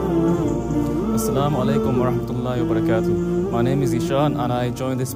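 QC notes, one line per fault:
No faults found. Nothing in the audio calls for a note.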